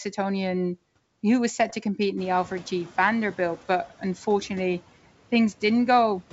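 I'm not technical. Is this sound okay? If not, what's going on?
No. Twice, bits flipped on the ADPCM link carrying the call. These are bit errors on an ADPCM link, and each one briefly throws the decoder off track. You hear pops and rough, crackly bursts with quick jumps in loudness at 1.61 to 1.74 s and again at 3.56 to 3.62 s.

Around 2 s the background noise in the room suddenly gets louder. The noise suppressor is slow to catch up, so from 2.17 s the noise comes through more strongly than it should. Over the next 0.83 s it gradually sinks down, settling by 3.0 s.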